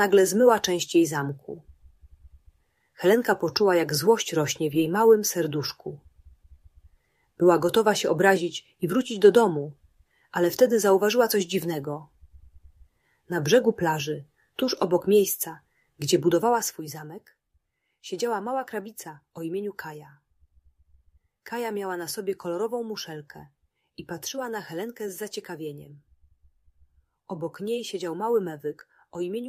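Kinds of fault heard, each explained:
Zipper noise: a short burst of fine ticking rides on the sound between 16.37 and 16.81 s, as the level drops by roughly 10 dB in a rapid staircase. The gain falls in 1 dB steps at around twenty steps a second. Each jump lands abruptly with no smoothing between values, so every step leaves its own small click. Together the clicks run into a brief zipping texture that lasts only as long as the level is moving.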